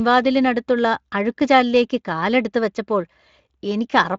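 No technical faults can be heard in the speech, which passes through a Speex codec whose bandwidth stops near 7.6 kHz.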